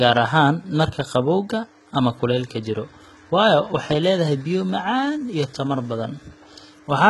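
Speech with HE-AAC compression throughout: the treble was likely rebuilt from copied lower bands at a bitrate around 16 kbps, so heavy damage leaves mismatched harmonics, gritty, metallic or lispy s sounds, and nothing above 11.8 kHz.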